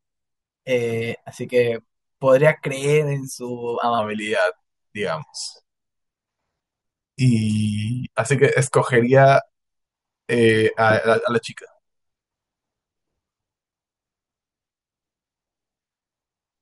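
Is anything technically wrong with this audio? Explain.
Yes. From 3.99 s to the end, there is a wrong sample rate fault: the samples are clocked out slower than they were captured, with no conversion, which fits 48 kHz audio played at 44.1 kHz. The speech runs at 0.919 times normal speed and about 1.5 semitones lower, sounding slowed and deepened.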